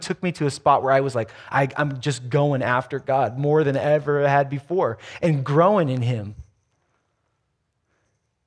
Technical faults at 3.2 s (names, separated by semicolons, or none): none